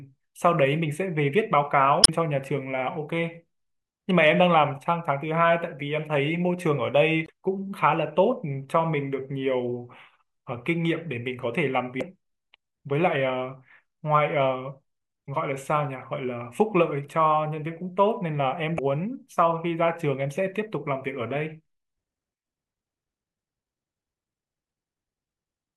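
Damaged data in the compressed stream breaks the speech at 2.01–2.09, 7.24–7.30, 11.98–12.03, 15.25–15.29 and 18.75–18.79 s. Corrupt frames desync the decoder, giving brief chirps, squawks, clicks or short holes, seen as vertical broadband smears on a spectrogram and abrupt discontinuities in the waveform.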